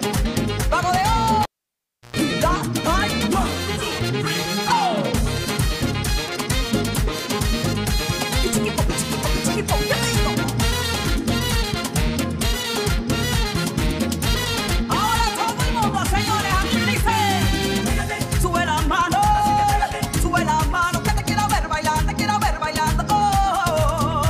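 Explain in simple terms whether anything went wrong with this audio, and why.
A cable pulled and plugged in, from 1.43 to 2.16 s. A live cable was yanked out, giving a sharp pop, and the sound then drops to near silence for about 0.69 s. As the plug goes back in, its tip touches first and picks up electrical hum from the mains, heard as a 60 Hz buzz lasting about 0.11 s. A second pop follows when the connection seats fully and the sound returns.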